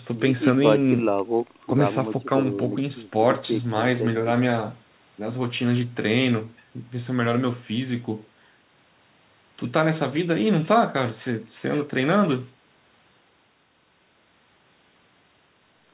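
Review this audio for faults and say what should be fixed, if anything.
Nothing here needs fixing: the speech comes through the call path as G.711 mu-law at 64 kbps, with nothing above 4 kHz as that codec gives, and there's no fault to chase down.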